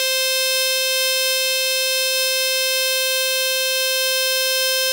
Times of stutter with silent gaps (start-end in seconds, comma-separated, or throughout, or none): none